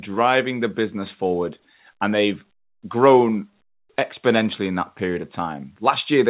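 The speech arrives through a telephone-band call path with nothing above 4 kHz, which fits G.711 A-law coding at 64 kbps, and no technical faults can be heard in it.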